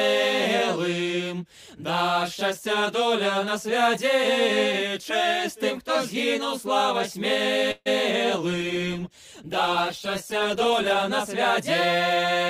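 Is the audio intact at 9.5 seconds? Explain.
No. A call bitrate drop runs from 8.51 to 11.16 s. The bandwidth estimate fell and starved the encoder, which fits a fall from 128 to about 17 kbps, so the sound turns coarse, rough and muffled.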